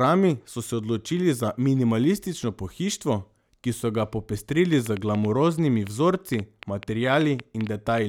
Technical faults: train of clicks

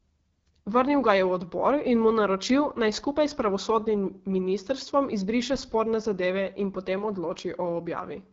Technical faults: AMR wideband (HD Voice) codec

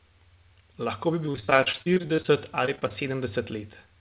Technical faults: repeated packet loss (robotic sound)

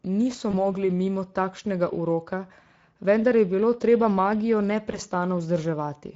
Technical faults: Speex codec; VoIP packet loss concealed by the speech codec

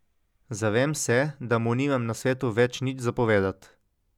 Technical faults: none

